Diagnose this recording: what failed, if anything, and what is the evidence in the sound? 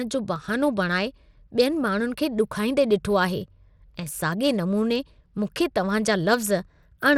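Codec stage: the speech carries plainly audible coding damage from start to finish, most likely Bluetooth SBC compression at a low bit pool, consistent with roughly 96 kbps. Starved of bits, the upper sub-bands lose detail and the remaining bands are coarsely quantised, leaving a gritty, aliased edge on the speech. A spectrogram shows nothing above 17.2 kHz and blotchy, flickering energy in the highest bands that remain.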